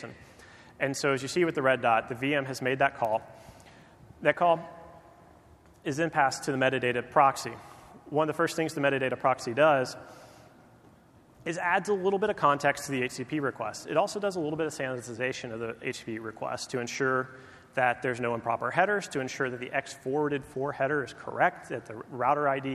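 A block size mismatch (padded) runs from 3.03 to 3.92 s. A buzz at about 46.9 Hz cuts into the audio there, which fits a later stage reading 1024-sample blocks that an earlier stage only partly fills, leaving a zero-filled gap in each one. The slowdown is negligible.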